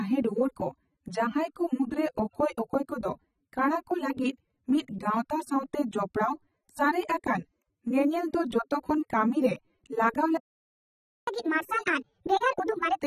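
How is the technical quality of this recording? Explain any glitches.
The recording has three technical faults: heavy lossy compression across the whole clip, a dropout near the end, and a fast, high-pitched passage right after it.

AAC compression runs through all 13 seconds of the speech, and the damage is plainly audible. Nothing is present above 13.6 kHz, so the top end sounds dull. The encoder splits each frame into frequency lines and spends its few bits on what the hearing model rates as most important. The bands it starves leave the sibilants smeared and fizzy, with a warbling texture. The sound points to AAC-LC at around 24 kbps, which is likely the cause.

A playback stall runs from 10.37 to 11.27 s. The speech cuts off mid-flow and about 0.9 s of silence follows. This is how it sounds when the player's buffer runs empty or its thread is held up. With no samples to output, it falls silent until data arrives again. 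The gap's abrupt start and end fit a likely underrun of that kind rather than a pause in the speech itself.

Catch-up at higher speed follows immediately, from 11.27 to 12.97 s. The player resamples its backlog to recover the lost time, playing at 1.5 times normal speed. Because resampling shifts speed and pitch together, the speech also rises by roughly seven semitones and sounds hurried and chipmunk-like. At 12.97 s the speed and pitch drop back to normal for the last fraction of a second.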